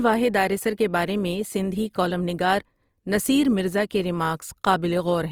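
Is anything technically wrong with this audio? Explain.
Yes. The whole speech clip sounds like likely Opus compression in CELT mode, fitting roughly 24 kbps: starved bands get filled with folded or noise content, so tones come out grainy and rough.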